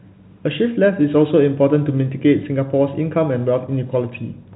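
No technical faults are audible.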